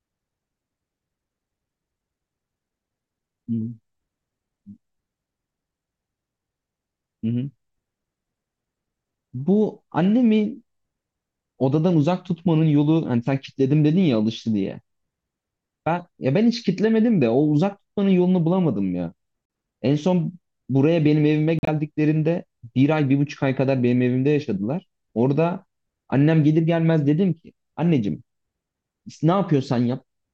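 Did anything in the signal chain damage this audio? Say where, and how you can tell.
Yes, at the codec stage: corrupt frame muted. Speech drops to abrupt silence at 19.46–19.50 s and 21.59–21.69 s, holes consistent with two and four rejected frames. Unlike a network dropout, timing never shifts and nothing repeats or stretches.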